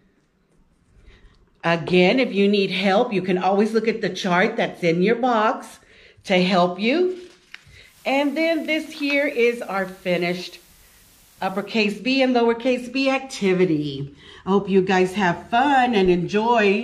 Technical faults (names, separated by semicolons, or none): digital radio blending to analogue